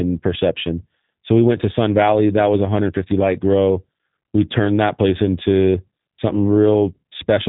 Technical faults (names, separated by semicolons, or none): G.729 codec